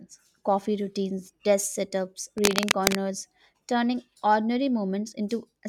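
At about 2.38 s a burst of cable scratch noise comes in and runs to roughly 2.95 s, a dense, ragged rustle sitting about as loud as the speech itself. It's likely a worn lead or connector being moved, its contact resistance jumping around.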